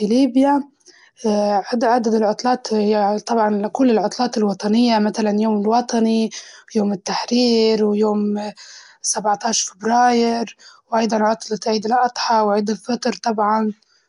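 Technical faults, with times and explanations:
throughout Nellymoser compression: rough, hissy, smeared underwater speech with nothing above 10.7 kHz, likely from Nellymoser Asao noise-filling starved bands, which fits a stream near 44 kbps.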